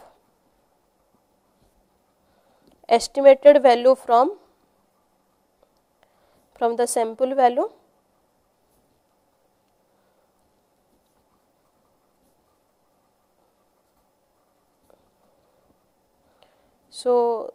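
No technical faults can be heard anywhere in the recording. Nothing in the audio calls for a timestamp or a repair.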